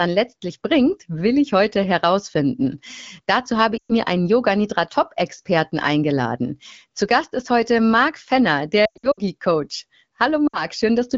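Lost AMR speech frames hit at 3.77–3.92, 8.85–9.20 and 10.47–10.65 s. The decoder repeats old settings with falling gain. Speech quickly fades to near silence, then returns rough.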